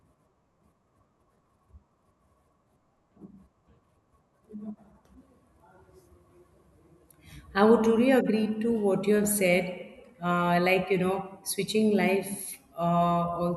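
No technical faults can be heard anywhere in this speech recording. Nothing breaks the sound at any point, from its opening moment to its last.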